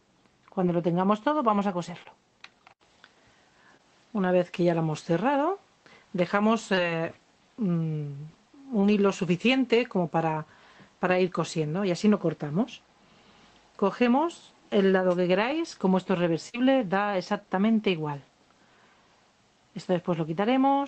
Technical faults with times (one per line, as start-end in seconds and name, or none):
2.03-2.07 short concealed packet loss
3.77-3.81 short concealed packet loss
6.75-6.79 short concealed packet loss
8.81-8.85 short concealed packet loss
15.32-15.71 CD scratch ticks
16.49-16.55 burst of packet loss